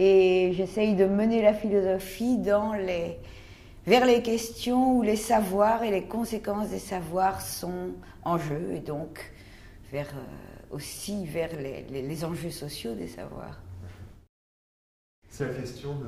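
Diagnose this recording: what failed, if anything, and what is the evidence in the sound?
The first 2.0 s sound dull and muffled, with the top end rolled away smoothly rather than cut sharply, about 14 dB down at 10 kHz relative to 1 kHz. This is de-emphasis applied wrongly in a processing or playback stage: a treble-cut filter applied where no matching pre-emphasis existed, or applied twice.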